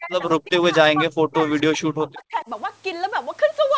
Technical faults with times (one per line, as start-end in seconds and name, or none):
0.00-2.49 speech suppressed in double talk